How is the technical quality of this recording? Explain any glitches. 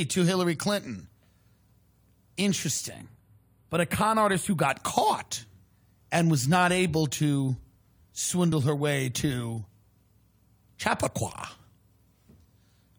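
The recording has two distinct glitches: a stretch of phasey coloration and one brief skip.

From 2.93 to 4.69 s there is channel delay (comb filtering). One channel lags the other by only a few samples, well under a tenth of a millisecond. When the channels are combined to mono, the shared speech cancels at regularly spaced frequencies, with the first notch around 7 kHz. The speech sounds thinner and slightly hollow at the top. On a spectrogram, a dark band appears near 7 kHz and stays fixed while the speech above and below it moves.

At 8.51 s a compressed frame was skipped. About one frame of the coded audio, roughly 20 ms of speech, was never decoded, which fits a frame length of about 23 ms. The playback jumps ahead across that gap. In the waveform, the speech envelope shows a small discontinuity. On a spectrogram, a narrow vertical seam appears where the harmonics shift abruptly.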